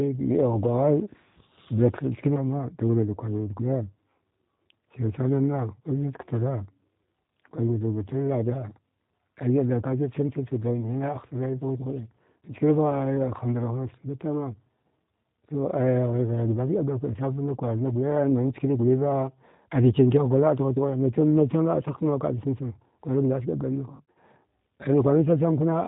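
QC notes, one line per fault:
Throughout: G.729 codec. The speech has been carried at 8 kbit/s through a coder that never sends the waveform itself. It sends only a vocal tract filter, a pitch predictor and a handful of pulses per 10 ms frame, and the decoder rebuilds the voice from those parameters. Nothing above 4 kHz survives, so the sound is dull and narrowband. The sparse pulse excitation gives it the plainly audible rough, slightly synthetic texture.
23.96 to 24.18 s: VoIP packet loss concealed by the speech codec. About 120 ms of audio went missing, scattered across roughly 200 ms, with the longest gap 40 ms. The pattern fits six lost 20 ms packets. For each gap the decoder kept extrapolating from its last pitch and filter while lowering the gain, so the speech turns into a buzzy tone or a coloured noise that fades. Because each frame builds on the previous one, the voice sounds weak or smeared for tens of milliseconds or more after the gaps.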